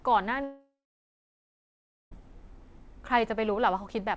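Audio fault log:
0.44–2.14 s, long network dropout: sound smears into a fading buzz, then about 1.4 s of silence; likely lost packets, concealed until audio resumes past the gap.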